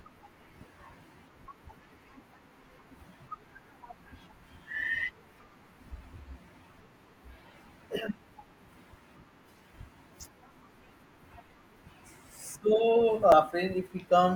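At 13.30 to 13.33 s, near the end of the speech, a short run of damaged data in the compressed stream throws the decoder off, and it misreads frames and hunts for the next frame header. The result is a brief glitch lasting about 36 ms.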